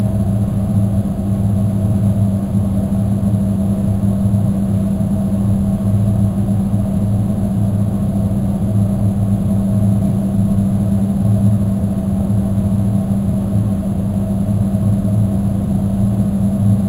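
Imaging from sample-and-hold upsampling runs through the whole clip. The rate was raised by holding each original sample across several new ones, with no interpolation filter to smooth the steps. The stepped waveform leaves mirrored copies of the spectrum stacked around multiples of the old rate, which points to material originally at about 11 kHz. The lowest copy sits between 5.5 and 11 kHz, about 31 dB below the sound itself. It is heard as a thin, metallic fizz over the sounds, swelling and fading with them.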